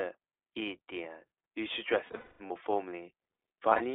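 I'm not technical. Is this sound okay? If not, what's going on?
No. The speech went through the iLBC codec, a phone-call format that keeps only about 300 Hz to 3.6 kHz, so it sounds thin, slightly rough and synthetic.

There are also lost iLBC frames. From 2.06 to 2.52 s, and briefly from 3.70 to 3.82 s, missing pieces were patched with a held, buzzy vowel-like sound. The longest patch lasts about a fifth of a second.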